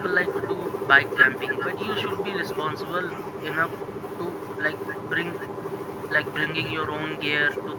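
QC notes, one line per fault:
throughout: echo with no canceller. Each phrase returns about 0.4 s later as a quieter, thinner copy, about 15 dB down, because a loudspeaker at the far end feeds a live microphone with nothing removing it. On a spectrogram every burst carries a faint, band-limited ghost trailing to its right, and the waveform shows smaller duplicate envelopes filling the gaps.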